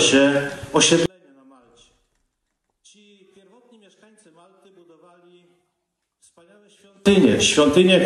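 From 1.06 to 7.06 s the sound falls by about 38 dB to a faint residue rather than full silence, likely from one channel inverted cancelling the shared content when summed to mono. Unlike a dropout, the centred material disappears but the leftover difference between channels remains.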